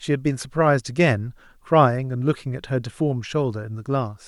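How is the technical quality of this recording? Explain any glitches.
No glitches to report; the speech recording shows no technical faults.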